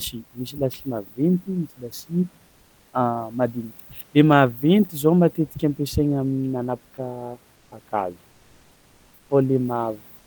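Comfort noise in place of the background appears at 7.55 to 7.71 s, 8.31 to 9.29 s, and from 10.17 s to the end. In each pause the real room noise, sitting about 37 dB below the speech, drops out and a smooth, featureless hiss takes over, about 1 dB quieter in the first gap and about 4 dB quieter in the others. This is likely Opus discontinuous transmission, with the receiver synthesising noise while the sender stays silent.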